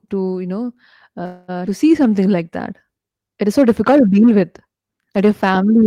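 A call audio freeze runs from 1.25 to 1.50 s, right after "to you know". The likely cause is packets stalling in transit until the jitter buffer emptied. The receiver stretched the last sound into a fading fill for about 228 ms, then resumed where it stopped, so nothing is lost.

A skip ahead follows at 1.66 to 1.69 s. Roughly 70 ms of speech was discarded while later packets were already waiting, and playback jumps forward across a join of only about 5 ms. The two sides butt together almost directly.

A jitter buffer slow-down runs from 1.69 to 2.24 s, ending just before "like that". To rebuild its reserve, the receiver repeated short pitch periods, adding 63 ms. Speech plays at about 90% speed at unchanged pitch, so sounds come out drawn-out.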